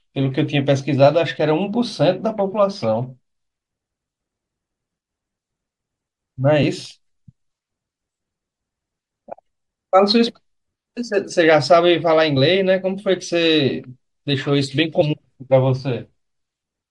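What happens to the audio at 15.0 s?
Compressed frames were skipped between 15.00 and 15.02 s, so the speech jumps ahead by about 50 ms, leaving an audible glitch at the join.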